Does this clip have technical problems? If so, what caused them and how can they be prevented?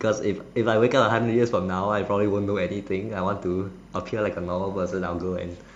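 Yes. Timecode bleed runs through the whole speech clip as a faint, steady chirping warble well below the speech. Linear timecode at 25 frames per second is leaking in from a neighbouring track or cable. Its square wave flips between tones near 1 and 2 kHz, which a spectrogram shows as constant horizontal bands at those frequencies from start to finish. Keeping timecode lines shielded and routed away from audio cables and channels prevents it.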